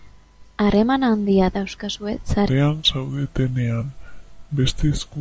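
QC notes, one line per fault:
2.49–5.20 s: wrong sample rate. From here to the end, the speech plays at two-thirds speed and 7.0 semitones lower. Speed and pitch fall together because the samples are played back unconverted, which fits 24 kHz audio clocked out at 16 kHz.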